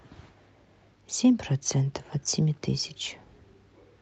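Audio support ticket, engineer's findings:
Listened through the speech on the WebRTC call path: nothing stood out, no symptom to log against any component.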